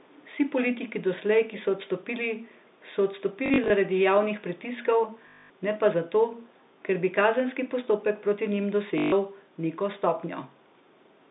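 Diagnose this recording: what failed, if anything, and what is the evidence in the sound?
Call processing: from 0.0 to 0.25 s a faint copy of the speech trails by 430 ms, roughly 30 dB down. This is likely echo leaking past the far end's canceller.

Network: packet loss with last packet repeated, at 3.46–3.7, 5.28–5.5 and 8.98–9.12 s. Looped 20 ms packets give a 50 Hz robotic stutter.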